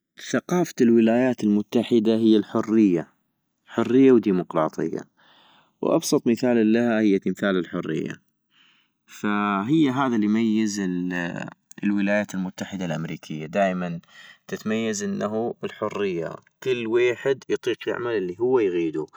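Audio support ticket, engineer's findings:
Channels drifting apart, whole clip. Slow flanging on speech in mono sum. Two capture devices on separate clocks, roughly 150 ppm apart; inter-channel delay grows to about 2 ms. Spectrogram: comb notches sweeping gradually.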